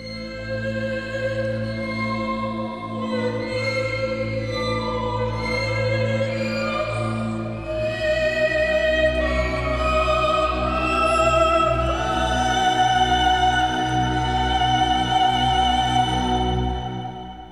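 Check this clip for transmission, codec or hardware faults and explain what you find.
Nothing stood out on listening to this clip.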